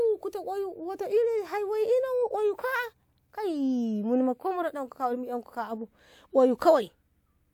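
A short speech recording with no technical faults to report. Nothing in it calls for a time or a cause.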